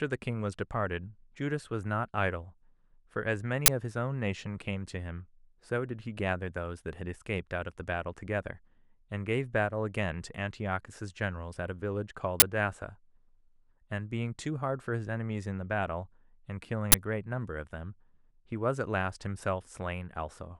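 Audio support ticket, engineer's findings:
Uninitialised buffer: loud 20 ms digital noise bursts at 3.66–3.68, 12.40–12.42, 16.92–16.94 s in speech; stale memory played before write. Full-block noise, not silence or a single click.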